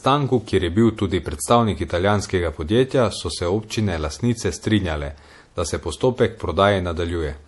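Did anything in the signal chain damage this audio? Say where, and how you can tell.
Yes, at the codec stage, throughout the speech. Nothing is present above 11.5 kHz, and the weak high detail swirls and warbles as it switches on and off between frames, with smeared consonant onsets. This is likely MP3 compression, starved of bits at a rate that fits about 48 kbps, which forces the encoder to drop the treble and zero quiet frequency lines. A plain low-pass filter would remove the top just as cleanly but leave no watery churn.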